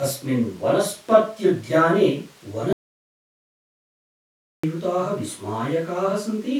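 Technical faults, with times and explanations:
2.73 to 4.64 s, audio dropout to silence: the speech stops abruptly in mid-flow and the track falls to silence for about 1.9 s, with no room tone or noise floor beneath it, before the speech resumes just as suddenly. That silent gap points to the input signal being lost upstream while recording carried on, most likely a momentary disconnection, link failure or accidental mute. Whatever was spoken during those 1.9 s is not recoverable.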